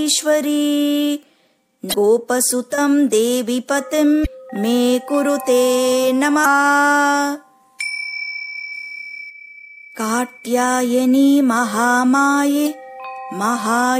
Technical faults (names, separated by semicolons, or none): damaged data in a compressed stream